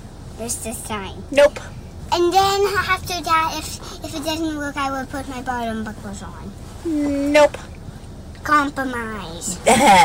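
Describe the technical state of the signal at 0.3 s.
At 0.3 s the signal is intact, with no audible dropout, distortion or other fault at that point.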